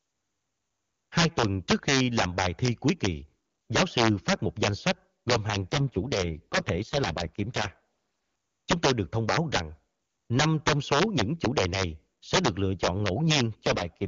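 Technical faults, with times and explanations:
Throughout: integer overflow. The loudest peaks of the speech burst into harsh, violent cracks, far sharper than ordinary clipping. The level is pushed about 6 dB past full scale, and roughly one percent of samples exceed the integer limit. Instead of being held at the ceiling, each of those samples wraps around to the opposite extreme, so every overshooting peak flips across the entire range and produces an instantaneous full-scale jump.
5.71 to 7.78 s and 13.63 to 14.07 s: AMR rate drop. Just after "danh sách gồm hàng", and again in the closing half-second, the speech turns rough, raspy and synthetic. The bandwidth and continuity stay the same. The AMR-WB link, which is otherwise clean at 23.85 kbit/s, is pushed down to 6.6 kbit/s, giving its bits to error protection. At that lowest rate the pulse-excited vocal tract model can no longer capture the voice's detail.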